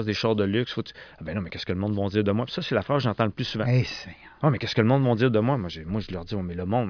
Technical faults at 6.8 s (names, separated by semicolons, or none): none